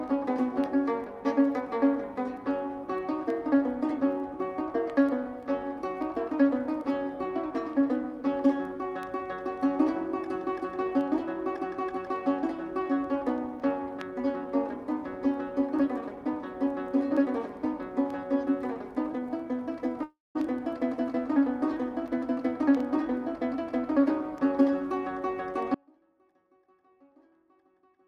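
At 20.03 s the sound abruptly smears into a fading buzz, falls to about 0.2 s of silence, and resumes at 20.37 s with roughly a third of a second missing. This is a long network dropout, likely from lost packets the receiver tried to cover.

From 25.75 s to the end the signal cuts off abruptly, leaving only a faint trace about 35 dB below its normal level. This is an audio dropout to a faint residue, likely where the source failed while the path after it stayed live.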